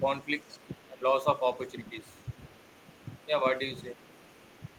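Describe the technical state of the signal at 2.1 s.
At 2.1 s the echo canceller has likely failed to clear the far end's loudspeaker sound from the microphone, so the other side's voice is leaking through. The leak runs from 1.35 to 3.28 s and sits very low, roughly 30 dB beneath the talker. It is a faint second voice behind the main speech, easy to miss unless you listen for it.

The same moment falls inside a brief spell of speech suppressed in double talk, from 2.03 to 2.15 s. With both sides talking at once, the canceller likely could not separate its own talker from the returning echo and turned the whole signal down. The talker's level dips by around 5 dB for about a tenth of a second, a short, shallow sag rather than a dropout.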